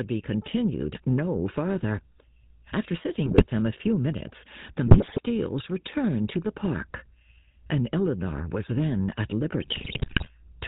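A speech recording run through the GSM full-rate codec for its whole length, and you can plainly hear it. Everything above 4 kHz is gone, and there's that familiar buzzy, gravelly roughness. It comes from the codec modelling the vocal tract and driving it with a sparse, regularly spaced pulse excitation, keeping only every third sample, which is consistent with the old 13 kbps full-rate coder. On top of that come three bursts of GSM bit errors, where corrupted bits hit the decoder's filter, pitch and gain values. Each affected frame then gets a bent spectrum or a sudden jump in level, so the speech turns into squawks, pops and gargling. The first burst runs from 3.26 to 3.47 s, the second from 4.86 to 5.20 s, and the longest and messiest from 9.62 to 10.3 s, which points to a fairly rough radio link in that stretch.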